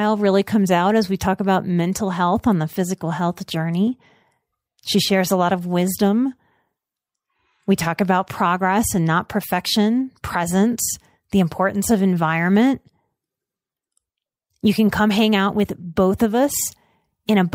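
Nothing in the recording stood out as a technical problem on listening.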